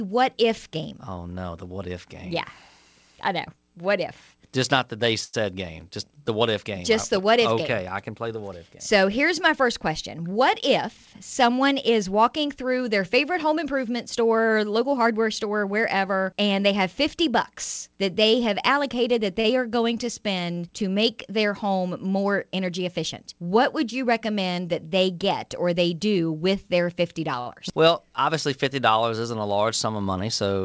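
At 5.24 to 5.35 s a short stall from a late packet occurs. The jitter buffer ran dry, so the receiver held the last sound for about 92 ms until the packet arrived, then resumed without losing anything. The sustained sound carries a slight buzz or dip. The same stall recurs at 19.40 to 19.46 s (40 ms filled) and 27.40 to 27.48 s (57 ms filled).

From 10.17 to 11.14 s a jitter buffer speed-up plays the audio at 108% by cutting pitch-period-length pieces, roughly a tenth of a second in total. It sounds hurried at unchanged pitch. A milder one at 22.60 to 23.47 s runs at 106%, shedding around 50 ms. All of this rides on a G.722 call path with nothing above 8 kHz.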